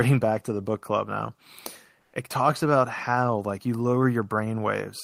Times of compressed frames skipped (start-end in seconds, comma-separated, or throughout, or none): none